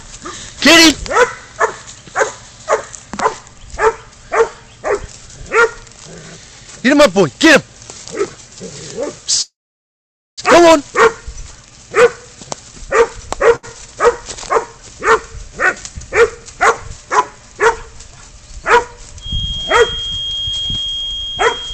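At 9.41 s the audio stops, and from there to 10.40 s it is held. This is a call audio freeze. The gap lasts about 0.96 s. A brief fading remnant of the last sound comes first, then about 0.86 s of silence. When the audio resumes, it continues exactly where it left off. Nothing is lost. The likely cause is packets delayed in transit, which left the jitter buffer empty. The playout now runs about 0.96 s later than before.

At 13.56 s there is a short stall from a late packet. It lasts 74 ms, ending at 13.65 s. One packet missed its playout time, so the receiver stretched the last sound to cover the wait. You hear a sound held slightly too long, with a faint buzz or dip. Then the audio picks up from the same point. Nothing is skipped, but the delay grows by another 74 ms.

From 16.23 s to 17.10 s there is a jitter buffer speed-up. The audio plays at 106 % speed, and the pitch stays the same. 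The buffer had built up more audio than it needed. To reduce the delay, the receiver cut many tiny slices, each a pitch period or so long. Together they remove about a twentieth of a second. The passage sounds slightly hurried.

At 19.18 s a feedback whistle begins and lasts to the end of the clip. It is a thin, steady tone at 3.2 kHz, about 10 dB below the main sound. Its level wavers slightly. The likely cause is a loudspeaker feeding back into a microphone with the loop sitting right at the edge of feedback. One frequency keeps ringing, but it never runs away into a howl.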